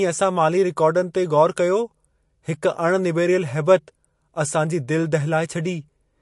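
From start to finish the speech carries plainly audible damage that is likely MP3 compression, and it sounds like a low bitrate, something in the region of 48 kbps. The top end stops dead at about 11.3 kHz, so the s sounds lose their air. Underneath there's a watery, swirly texture, because the encoder ran short of bits and dropped weak frequency detail that flickers in and out from frame to frame, and the attacks come across smeared.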